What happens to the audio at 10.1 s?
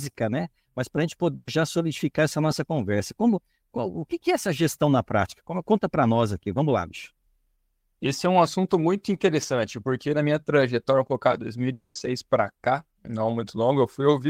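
Nothing goes wrong at 10.1 s; the audio there plays through intact, with no dropout, click, distortion or other fault.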